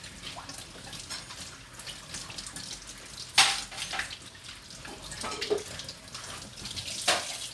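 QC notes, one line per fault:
No audible faults found.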